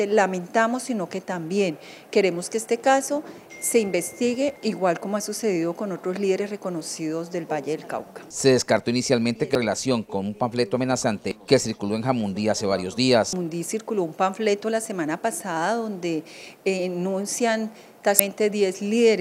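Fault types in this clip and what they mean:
Damaged data in a compressed stream: misread frames make the decoder lose sync, causing five brief blips.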